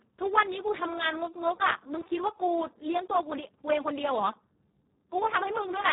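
From start to finish, the speech carries heavy Speex codec damage. With so few bits for the excitation, the voice sounds noisy and hoarse, which fits a setting near 4 kbps. Nothing is heard above 3.8 kHz, so everything sounds narrow and dull.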